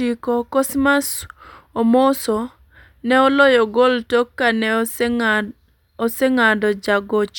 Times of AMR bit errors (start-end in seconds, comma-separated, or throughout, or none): none